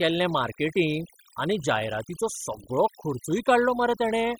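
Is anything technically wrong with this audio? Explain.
Yes. Throughout the speech there is overdone noise removal: the noise reducer, set far too aggressively, cuts individual frequency bands down to nothing wherever they sit close to its noise estimate, taking the quieter speech components with them. Pauses fall to near silence dotted with twinkling artefacts.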